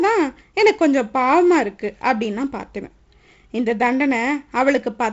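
No faults are audible in this speech, which is carried over G.722 wideband telephone coding at what sounds like 48 kbit/s, with nothing above about 7.7 kHz and the light added noise that coding leaves in both bands.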